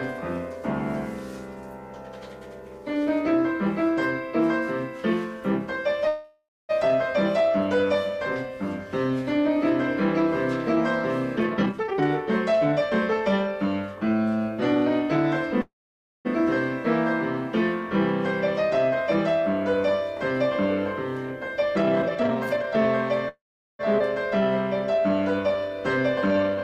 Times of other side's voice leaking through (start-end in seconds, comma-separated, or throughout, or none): none